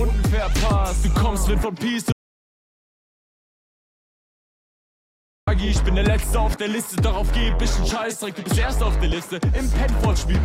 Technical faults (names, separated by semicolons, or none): audio dropout to silence